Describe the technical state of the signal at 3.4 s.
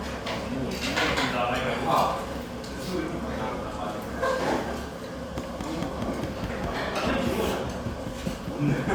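At 3.40 s the everyday sound jumps forward abruptly, heard as a tiny skip, the signature of a dropped buffer (overrun). The likely cause is samples not being collected before the hardware overwrote them, so a few milliseconds of audio vanish and the two edges are spliced directly, with no gap of silence. On a waveform this appears as a sudden step discontinuity; a spectrogram shows a thin vertical broadband streak at that instant.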